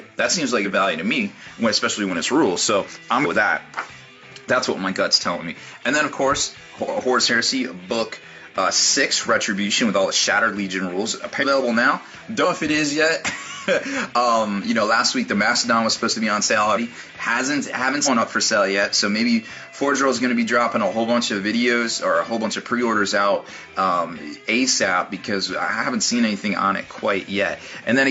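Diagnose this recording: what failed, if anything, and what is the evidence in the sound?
Compressed frames were skipped at the codec stage: frames went missing or the decoder rejected them, so the audio jumps ahead at 3.21 s (about 200 ms lost), 16.72 s (about 150 ms) and 18.02 s (about 300 ms). Each join lasts about 0.06 s.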